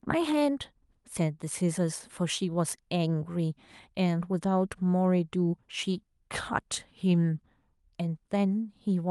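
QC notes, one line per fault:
No faults found.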